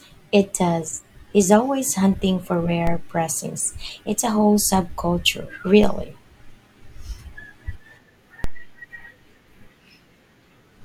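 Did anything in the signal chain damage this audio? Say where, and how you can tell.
Yes. There is a DC step, three times, at 2.87 s, 5.84 s and 8.44 s. The first comes just after "always hunting for", the second just after "a whole subculture". Each is a single low thump under the speech, which carries on unchanged. The waveform's zero line jumps by about -12 dBFS and then drifts back, as a 2 Hz high-pass would pull it. This points to the converter stage recalibrating, or an offset input being switched in.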